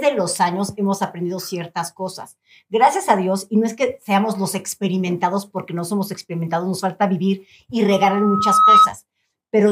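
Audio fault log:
7.90–8.91 s, loudspeaker feedback squeal: a single tone near 1.3 kHz rises out of the sound, swelling over most of a second until it sits roughly 10 dB above everything else, then stops. A microphone is picking up the loudspeaker it feeds. At 1.3 kHz the loop's gain exceeds one, so that frequency keeps reinforcing itself on each pass until the amplifier limits it or the loop is broken.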